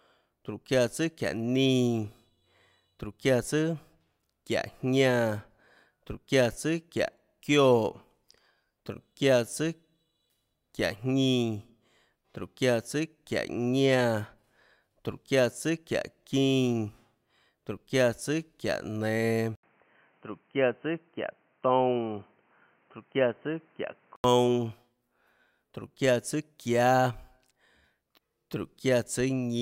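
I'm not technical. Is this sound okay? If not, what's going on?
No. From 19.55 to 24.24 seconds the speech turns dull and boxy, with nothing above about 3.1 kHz. There's an 80 ms gap at the switch and a faint new background noise. That's likely an input switched to a poorer device mid-recording.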